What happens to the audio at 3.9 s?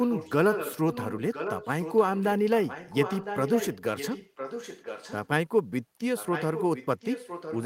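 An echo leak runs from 2.65 to 5.28 s: a delayed copy of the speech trails about 1.01 s behind, roughly 10 dB quieter, likely from a loudspeaker's sound escaping the far end's echo canceller.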